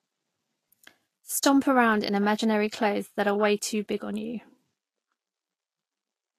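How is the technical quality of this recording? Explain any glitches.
The recording is technically compromised by lossy coding throughout. The fault is Vorbis compression, likely at a low bitrate, which fits something around 33 kbps. The encoder ran short of bits, so it removed everything above about 14.2 kHz and quantised the remaining treble so coarsely that its fine detail was replaced by noise of similar energy. Across the whole speech clip this is plainly audible: sibilants turn hissy and grainy, tones sound roughened, and consonant attacks lose their sharpness and blur.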